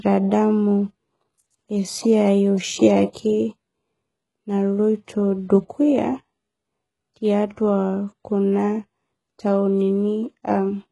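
Speech runs through the whole clip with a heavily damaged top end: s sounds come out gritty and metallic, and nothing is present above 11.5 kHz. That treble is synthetic, pointing to HE-AAC compression at a very low bitrate, likely around 12 kbps, where upper bands are copied from lower ones. From 3.12 to 3.15 s a short hiss of about 29 ms precedes a sharp attack, softening it. This is pre-echo: the codec spread quantisation noise across its block, into the quiet just before the onset.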